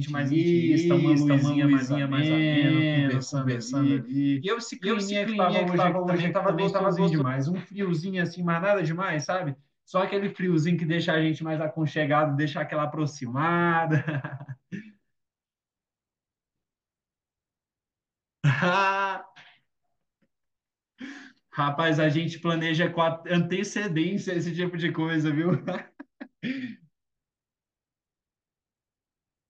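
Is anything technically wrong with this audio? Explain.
Yes. From the very start until 7.22 s, the speech has a doubled audio track. A second copy trails roughly 400 ms behind, about as loud as the original. It is likely a second capture through a slower path. The copy has no decay or room colour, and it stops abruptly.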